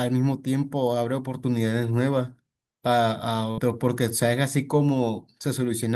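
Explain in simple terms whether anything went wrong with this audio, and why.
At 3.51 to 3.60 s there is a burst of packet loss. Several pieces of the audio stream arrived too late or not at all, so the player stretched the last sound for about 63 ms, fading it out, then skipped ahead. Roughly 60 ms of speech is missing.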